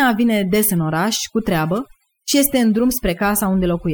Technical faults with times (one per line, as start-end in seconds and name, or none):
0.00-3.94 overdone noise removal